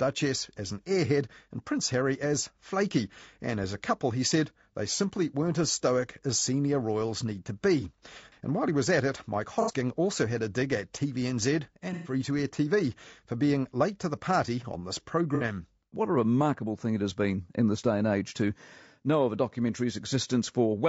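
Throughout the clip the speech is coded with too few bits, most likely by low-delay AAC compression such as AAC-ELD. Its short frames resolve pitch harmonics poorly, so the voice sounds plainly rough and grainy, with noise between harmonics and a thin, synthetic top band, which fits a rate of around 32 kbps.

At 9.62 to 9.73 s, before "also had a dig", AAC frame loss with concealment drops about 60 ms, and the decoder rebuilds it from the previous spectrum as a smeared, noisy patch. A longer gap of about 120 ms at 11.93 to 12.13 s, before "to air", is filled in the same way. A third, about 60 ms, follows "the party on this" at 15.35 to 15.43 s.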